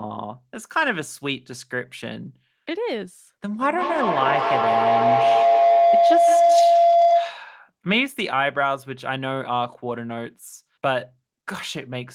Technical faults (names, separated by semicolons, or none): feedback howl